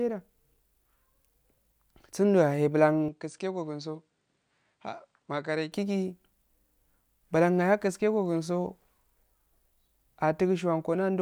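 At 3.08 s the speech suddenly loses its top end. Nothing comes through above about 9.1 kHz, the level drops a few dB, and a faint new background hiss appears, sitting well below the voice. There's no gap at the changeover, just an abrupt shift in tone that holds until 5.72 s and then snaps back. That's the signature of the input switched to a poorer device, likely a second microphone or a headset's narrower path.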